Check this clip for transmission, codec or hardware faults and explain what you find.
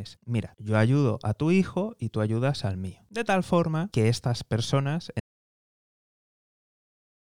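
An audio dropout to silence begins at 5.20 s, just after "forma que estas personas", and runs to the end of the clip, about 2.15 s in all. The input feeding the recorder was likely lost, through a disconnected device, a failed link or a mute, while the recording carried on writing silence. The speech cuts off mid-phrase into silence with no room tone, and whatever followed is missing.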